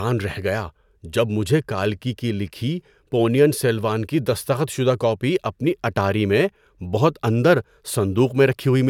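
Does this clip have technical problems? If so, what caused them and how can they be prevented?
No, there are no technical problems in this clip.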